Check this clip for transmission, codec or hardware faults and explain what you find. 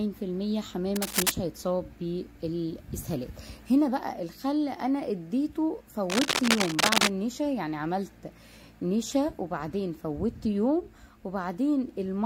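Two bursts of cable scratch noise, from 0.95 to 1.31 s and from 6.10 to 7.08 s. Both are dense, ragged crackling and rustling laid over the sound, the first about as loud as the sound itself, the second a little louder and lasting nearly a second. The likely cause is a worn cable, connector or control being moved, so that its contact resistance jumps about rapidly and injects uneven noise into the signal.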